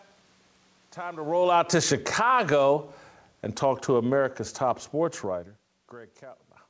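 From 1.34 to 3.02 s the speech sinks by about 6 dB, with the room noise behind it dropping too, and from 3.6 to 5.55 s it sinks again by about 4 dB. This is automatic gain falling: the gain control judged the input too loud, or its background noise too strong, and turned itself down. The talker's movements near 1 and 5 s change level differently, and the audio has nothing above 8 kHz.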